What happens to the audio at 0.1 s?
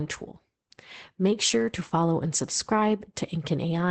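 At 0.1 s the speech is already passing through Opus voice compression, which runs for the whole clip: the SILK linear-prediction coder, at a rate that fits about 12 kbps, codes the excitation coarsely in 20 ms frames, leaving the voice plainly muffled, hoarse and faintly robotic.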